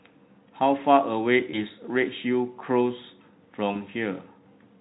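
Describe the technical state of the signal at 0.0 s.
At 0.0 s the speech signal is intact, with the Speex codec path working normally and no fault present at that moment.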